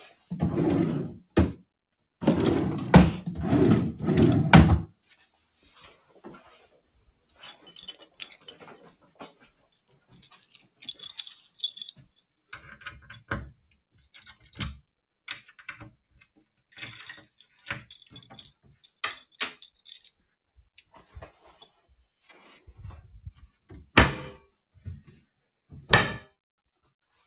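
A noise suppressor applied to music or sounds runs through the whole clip. It treats sustained and ambient parts of the sound as noise and pulls them down, letting onsets through while held material and decays sag. The level swings by around 10 dB, giving a pumping, uneven quality. Because the sound arrives over a call path with nothing above 4 kHz, which fits G.711 mu-law at 64 kbps, it is also band-limited.

Sound cut by the noise suppressor shows up as distinct dips at 0.10–0.31 s (about 12 dB), 4.87–7.66 s (about 18 dB), 8.02–8.19 s (about 14 dB), 8.36–8.65 s (about 9 dB), 8.81–10.39 s (about 17 dB) and 11.96–12.33 s (about 16 dB). In each, the suppressor judged the ongoing sound to be noise and clamped it harder than its surroundings. The long stretches near 5–7.7 s and 8.8–10.4 s lose roughly two seconds and a second and a half of body. There the sustained sound sinks and its tails are cut short while sharper attacks survive.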